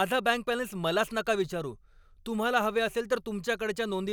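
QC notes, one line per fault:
Nothing stood out on listening to this speech recording.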